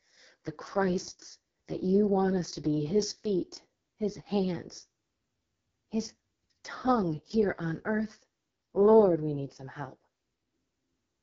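Speech coded throughout with the AMR wideband (HD Voice) codec at a rate consistent with its lowest 6.6 kbit/s mode, leaving heavy rough, raspy distortion and nothing above 7 kHz.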